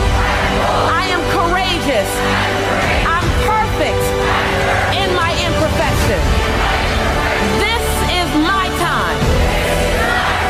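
No technical faults are audible.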